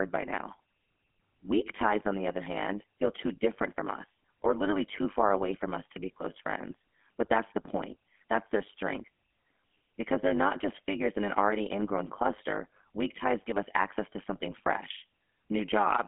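From the first moment to the last, the speech carries overlap-add ripple: the signal was split into windowed frames and rejoined with an overlap whose gains don't add up evenly, so the level dips once per frame, at around 100 Hz, with swings of about 60 dB. That depth and rate make a harsh, robotic buzz rather than a slow tremolo. Because the dips lock to a frame grid instead of following the voice, it differs from gating or compressor pumping.

The whole clip is also coded with the GSM full-rate codec, at a rate that fits 13 kbit/s. Its vocal-tract model is driven by a sparse, regularly spaced pulse excitation, and that gives the plainly audible gravelly, buzzy grain. The band runs roughly 200 Hz to 3.4 kHz with nothing above 3.7 kHz, which is narrowband telephone sound. What separates it from plain band-limiting or a cleaner narrowband codec is that roughness woven into the voice itself.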